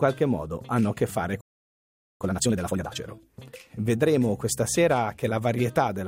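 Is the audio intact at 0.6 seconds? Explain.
Yes, the audio is intact at 0.6 seconds, with no fault audible at that moment.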